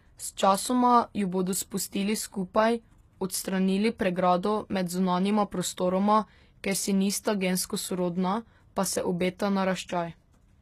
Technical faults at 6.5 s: HE-AAC compression

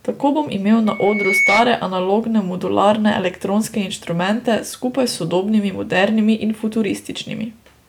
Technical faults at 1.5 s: loudspeaker feedback squeal

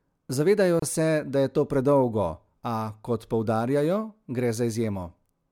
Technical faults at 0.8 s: gap at a join of encoded pieces

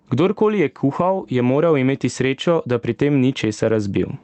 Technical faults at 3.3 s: gain pumping

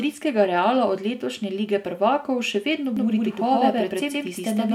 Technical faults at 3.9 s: doubled audio track

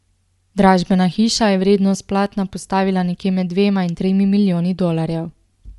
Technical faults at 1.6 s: Bluetooth LC3 compression

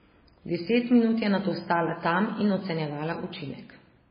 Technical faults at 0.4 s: MP3 compression

